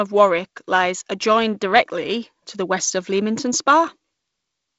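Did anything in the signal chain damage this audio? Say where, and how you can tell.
No, nothing in the chain damaged this speech: it has passed through G.722 wideband telephone coding, which is audible as a band that stops at about 7.7 kHz and a light coding hiss consistent with the codec's 48 kbit/s mode, and that is the expected sound of the codec working as designed.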